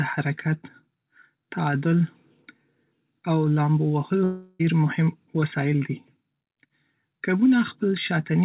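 From 4.24 to 4.61 s the speech breaks off and a fading buzz stands in for about 0.35 s of lost signal, likely a long network dropout. The receiver stretches the last sound rather than going silent, and audio resumes at "مهم وسایل دي" with that stretch missing. Throughout, the call path's narrowband coding leaves nothing above 4 kHz, consistent with G.711 mu-law at 64 kbps.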